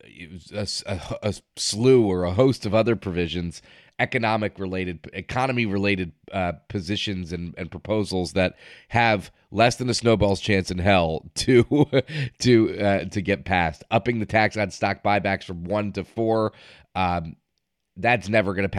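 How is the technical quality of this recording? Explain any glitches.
Nothing in the recording stood out as a technical problem on listening.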